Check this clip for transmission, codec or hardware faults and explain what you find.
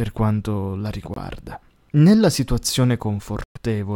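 Two short dropouts interrupt this speech clip. At 1.14 s, just after "quanto la", the audio cuts out for about 23 ms, and at 3.44 s a longer gap of about 116 ms follows. Both are abrupt silences after which the speech resumes further along, as if it had kept playing. This is the signature of a Bluetooth dropout, likely caused by audio packets arriving too late and being discarded.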